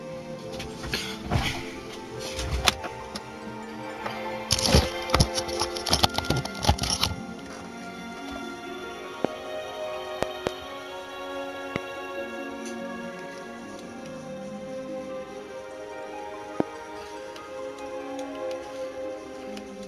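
Loud pops at 9.25–9.27 s, a double pop at 10.23–10.49 s, then 11.76–11.78 s and 16.60–16.62 s: sharp thumps about 20–25 dB above the sound, which continues underneath. Likely a voltage pulse from static or a switching transient.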